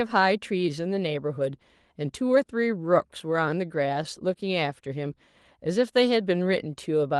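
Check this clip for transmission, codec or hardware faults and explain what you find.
Listening through the speech, nothing stood out that would point to a transmission, codec or hardware problem.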